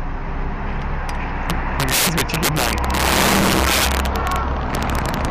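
Violent, sharp cracks burst out on the loudest moments throughout the sound, far harsher than ordinary clipping. This is integer overflow: driven roughly 12 dB too hot, about 5% of samples exceed the integer limit and wrap to the opposite extreme instead of being held.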